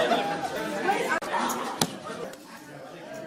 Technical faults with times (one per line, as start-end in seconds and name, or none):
0.55-0.57 skip ahead
1.96-3.11 jitter buffer speed-up